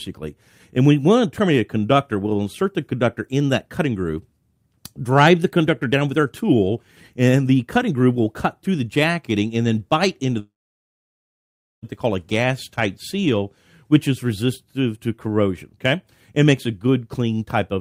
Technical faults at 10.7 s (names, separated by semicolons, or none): long network dropout